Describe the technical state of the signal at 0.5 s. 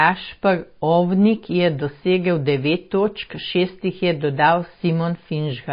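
At 0.5 s the speech carries MP3 compression damage that runs through the whole clip, likely from an encoder starved of bits, and the damage fits a very low rate of around 24 kbps. The encoder has cut the treble, leaving nothing above 5 kHz, and keeps dropping weak frequency lines in and out between frames. The result is dull, muffled speech with a plainly audible watery, swirling texture and softened consonant attacks.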